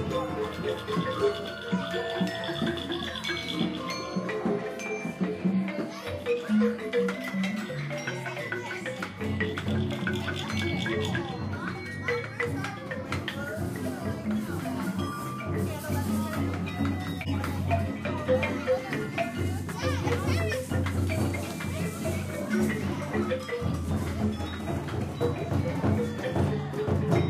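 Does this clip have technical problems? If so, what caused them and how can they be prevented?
Yes, there's a corrupt frame decoded at 17.21 to 17.31 s, a short blip of about a tenth of a second. Some bits in the compressed stream got flipped, and the decoder played the damaged data anyway, so energy ended up at frequencies where the sound never had any. It spans what sounds like a couple of frames and peaks at around -20 dBFS. To prevent it, protect the stream with checksums or error correction so the decoder can detect a bad frame and conceal it instead of playing it.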